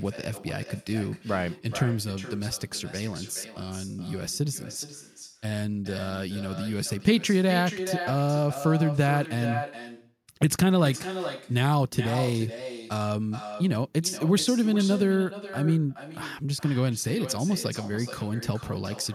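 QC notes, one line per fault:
Throughout, echo with no canceller. Every phrase returns as a fainter copy roughly 0.4 s later, about 12 dB below the direct speech. The far end is playing the call over a loudspeaker. Its microphone catches that playback and sends it straight back. Nothing subtracts it on the way. The copy has crossed the network twice, hence the delay. It has also passed through a speaker and a room, so it sounds thinner than the original.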